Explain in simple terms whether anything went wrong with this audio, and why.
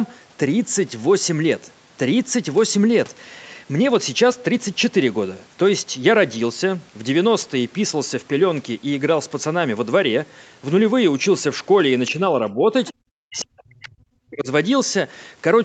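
Near the end of the clip the speech drops out in pieces. From 12.4 to 12.69 s it dips moderately. From 12.92 to 13.05 s and again from 13.23 to 14.47 s it nearly vanishes. This is speech suppressed in double talk. The likely cause is that both people were speaking at once, and the call's echo canceller could not tell the talker apart from the loudspeaker echo. It turned everything down, turning the talker down as well.

Just before the second dropout, from 12.85 to 12.92 s, a brief, faint scrap of a second voice slips into the recording. This is the other side's voice leaking through. It is most likely coming from the other caller's voice playing on the talker's loudspeaker and being picked up again by the microphone. The echo canceller did not remove it completely, so a short fragment of that voice remains, well below the main speech.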